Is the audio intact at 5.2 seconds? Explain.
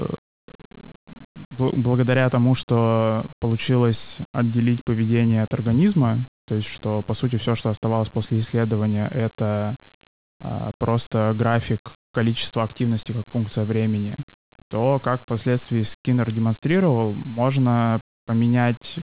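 Yes, at 5.2 seconds the speech plays through intact, with no fault at that moment.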